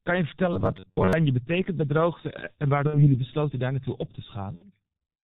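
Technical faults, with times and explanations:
Throughout, G.723.1 codec: the whole speech track is squeezed to about 6.3 kbit/s in 30 ms frames, and the damage is heavy. Nothing survives above 4 kHz, so the voice is muffled and hoarse, and consonants smear because the codec's vocal model updates only once per frame. On a spectrogram the energy stops at a hard ceiling near 4 kHz, and the formant bands look blocky, stepping at 30 ms intervals rather than gliding.
0.53 to 1.13 s, robotic sound from repeated short buffers: just before "betekent bij" the speech turns into a rigid metallic buzz at 93.8 Hz that still follows the rough shape of the words. The likely cause is fresh audio arriving too slowly, so the playback fills the gaps by looping its last fragment, roughly 11 ms long. Much of the stretch is recycled material. On a spectrogram this shows as evenly spaced harmonic stripes on a 93.8 Hz grid, and the waveform shows one short shape repeating.
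2.87 to 3.17 s and 4.55 to 4.66 s, VoIP packet loss concealed by the speech codec: each event loses two frames, 60 ms in all. The first comes just before "besloten daar naartoe op" and the second just after "daar naartoe op te". The decoder bridges the gaps by extending its last pitch and filter at falling gain, which produces a brief buzzy tone or coloured noise that fades. Because each frame builds on the one before it, the speech stays weakened for a while after real data returns. On a spectrogram the harmonics freeze flat and dim, and the waveform envelope sags before it recovers.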